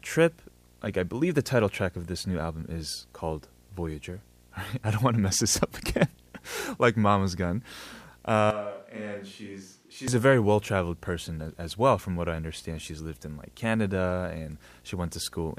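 A speech recording with a steady buzz throughout, sitting roughly 30 dB below the speech with hash above it. This is video or display buzz from a screen or video cable coupling in at a 60 Hz field rate. From 8.51 to 10.08 s the speech turns suddenly roomy and hollow, drops roughly 10 dB, thins in the bass and gains background noise, then snaps back. This is likely a switch to a distant microphone, with a farther pickup standing in for the close one.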